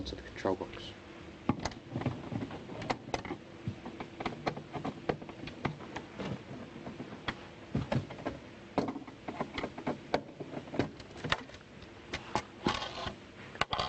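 There are no technical faults to describe at any point in the audio.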